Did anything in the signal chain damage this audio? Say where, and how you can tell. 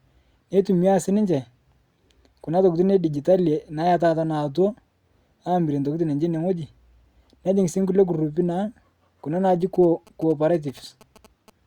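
Yes. Near the end, from 9.75 to 11.50 s, the analogue wiring picks up GSM signalling bursts from a nearby 2G phone. The circuit rectifies the radio bursts into a galloping dit-dit pattern of short 217 Hz buzzes, about 25 dB under the speech.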